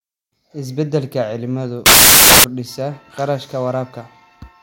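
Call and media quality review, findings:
Samples built from the wrong bytes, 1.86–2.44 s: loud broadband hiss replaces the speech. Decoder misassembles sample bytes, so low-order bits dominate. Spectrogram shows a flat full-band wash; waveform is a dense, loud block, thinning only in near-silent stretches.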